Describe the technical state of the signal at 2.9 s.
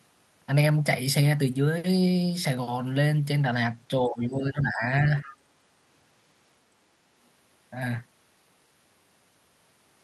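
At 2.9 s the speech signal is intact, with no audible fault at that moment.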